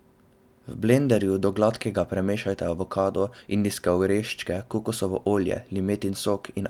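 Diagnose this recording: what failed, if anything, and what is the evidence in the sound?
Nothing failed here as far as I can hear; the speech comes through steady and intact at every stage, with no sign of trouble from the wiring, converter, buffering, processing, network, storage or playback side.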